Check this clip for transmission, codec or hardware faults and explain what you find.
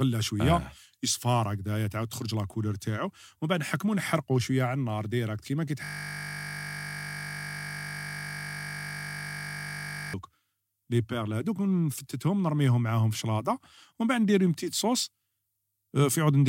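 There's one hardware fault, a system hang loop, from 5.84 to 10.14 s, right after "على النار ديريكت كيما". The system froze while the sound hardware kept replaying a 20 ms buffer, so one tiny slice of speech repeats hundreds of times, giving a steady 50 Hz buzz.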